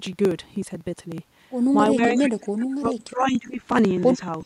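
A steady train of small ticks runs through this speech clip from 0.07 s to 4.41 s, one every 62 ms, some seventy in all, audible only where there is signal. These are periodic USB or driver dropouts. At each tick roughly 2 ms of audio is skipped outright rather than filled with silence, so the waveform jumps and clicks. The rigid spacing points to a background task stalling the USB bus or audio driver on a fixed cycle. Between 1.94 s and 3.61 s the voice repeatedly sinks and breaks up, falling by as much as about 30 dB and losing around a second and a half of level in patches. This is speech suppressed in double talk, likely from an echo canceller that, with the far side talking at the same time, could not separate its own talker from the loudspeaker return and pulled everything down together. From 2.02 s to 2.23 s a delayed copy of the voice arrives 380 ms late and fairly loud, only about 5 dB below the speech. 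A second, much fainter copy with the same 380 ms lag appears from 4.00 s to 4.26 s, about 35 dB down. Both are echo leak, likely where a loudspeaker-playing endpoint's canceller let part of its microphone pickup through and sent it back.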